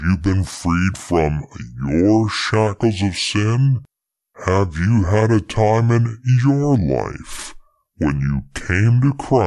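Wrong sample rate runs throughout the clip. The speech plays at about two-thirds speed and roughly 7 semitones lower, sounding slow and deep. Speed and pitch shift together, which fits audio recorded at 48 kHz being played back at 32 kHz without conversion.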